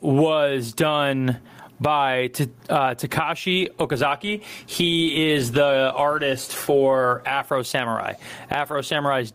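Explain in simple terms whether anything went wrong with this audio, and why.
Something did go wrong: the recording has gain pumping from start to finish. Loud and quiet parts sound squashed toward the same level. The likely cause is microphone gain set far too high, with a fast limiter or compressor pulling the level down hard on every loud sound.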